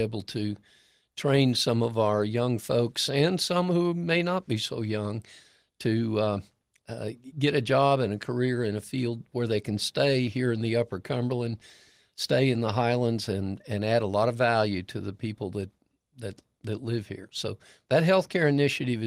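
No technical faults can be heard in this speech.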